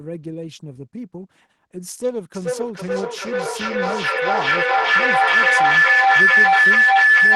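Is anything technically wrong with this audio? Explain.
Yes. From 2.34 s to the end, a feedback howl takes over the speech: a piercing tone around 2 kHz swells until it is about 15 dB louder than the talker, pulsing roughly every 400 ms. It comes from an acoustic loop between a microphone and a loudspeaker in the same room. Each pass around the loop returns the sound louder, so the repeats build instead of dying away and narrow to the frequency the loop favours.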